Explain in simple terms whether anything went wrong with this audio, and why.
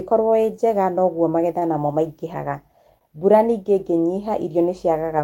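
Short stalls from a late packet happen twice: at 1.59 to 1.64 s, just after "ĩ njega noguo", and at 2.99 to 3.03 s, just before "mbura ningĩ". Each time a piece of the audio arrived late, so the player stretched the last bit of sound for about 23 ms and then 18 ms while it waited. Nothing is lost. The speech resumes exactly where it stopped, just a moment later, with a sound briefly held too long.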